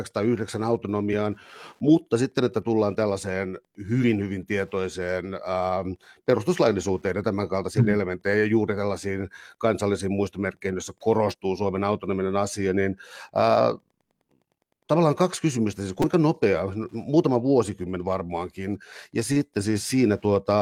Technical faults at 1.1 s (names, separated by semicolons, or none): Wi-Fi interference; damaged data in a compressed stream